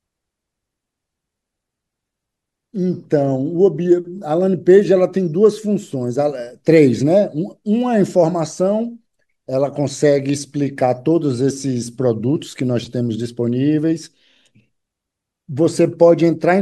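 Nothing goes wrong anywhere in this bit of speech, so there's no technical fault to point out.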